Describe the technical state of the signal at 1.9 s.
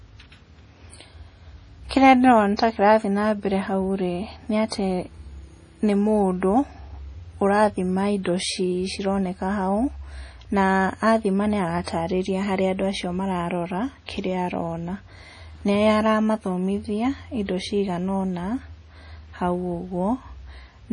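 At 1.9 s a transform codec has smeared quantisation noise back in time, producing pre-echo from 1.89 to 1.91 s. A sharp attack landed late in a coding block, and the noise budget sized for that loud onset also spread across the quiet stretch just before it, about 23 ms ahead of the transient. You hear a brief hiss leading into the attack, and the onset itself comes across soft and blurred instead of crisp.

That smearing sits inside a wider problem: the whole speech clip carries heavy damage whose likely cause is MP3 compression, starved enough that it fits a low bitrate around 32 kbps. With so few bits, the encoder cuts the treble outright, so nothing remains above about 10.5 kHz, and it drops weak spectral lines that flicker in and out from frame to frame. The result is a dull, watery, swirling texture, with metallic chirps on s sounds and smeared attacks like the one at 1.9 s.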